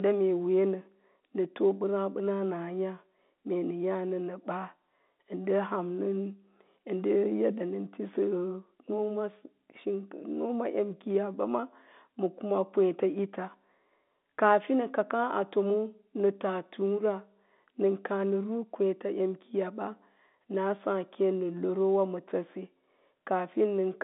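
No faults: the speech runs through an ordinary G.711 telephone path, band-limited to 200 Hz to 3.7 kHz with nothing above 3.8 kHz, exactly as that channel should sound.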